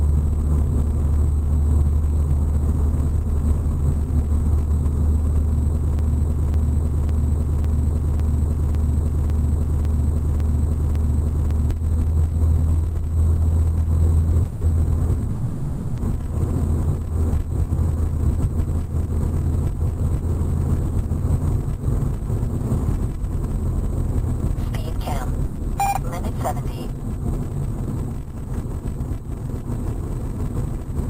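A broken-record loop runs from 5.99 to 11.71 s. The same 0.55 s fragment repeats back to back ten times, with no change from one pass to the next. This is likely a player, encoder or stream that stalled and kept resending the last piece it held. Whatever should have played across those nearly six seconds never arrives, so that stretch of the original audio is gone.

A short stall from a late packet starts at 14.43 s. One packet missed its slot, the jitter buffer ran dry, and the receiver stretched the last sound by about 20 ms until the packet showed up. The audio resumes from the same point, so nothing is lost, but the sound is briefly held.

That stall runs straight into a call audio freeze from 14.47 to 14.75 s, where about 140 ms of continuation is generated. A second, longer freeze follows from 15.31 to 16.00 s, filling about 670 ms. In both, the last sound is carried on as a fading buzz or hiss rather than dropping to silence. 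These are likely packets held up in transit that emptied the buffer. Playback picks up where it stopped, so delay is inserted rather than audio removed.

From 17.42 to 23.87 s a jitter buffer speed-up plays the sound about 3% fast. The receiver trims pitch-period-sized slivers repeatedly, roughly 0.2 s in total, to shed built-up delay. Pitch holds steady while pacing runs slightly faster.

Another short stall from a late packet, at 25.47 to 25.58 s, holds a sound for about 90 ms before continuing intact.

A final jitter buffer speed-up from 29.41 s to the end runs about 5% fast and drops roughly 0.1 s of material.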